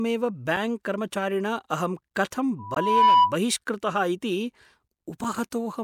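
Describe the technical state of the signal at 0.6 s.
Damaged data in a compressed stream at 0.56 s: corrupted bytes make the decoder misread a frame and resync at the next header, producing a brief blip.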